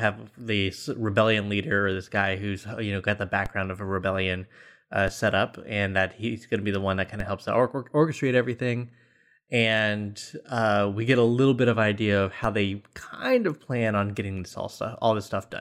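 A speech clip with four DC steps, at 3.46 s (after "you know got the"), 5.08 s (after "of a rebellion uh"), 7.20 s and 12.44 s (before "they kind of plan"). Each time the waveform's zero line jumps by about -20 dBFS and then bleeds back toward zero as if through a 20 Hz high-pass. That sudden offset and its quick decay register as a short low thump under the speech.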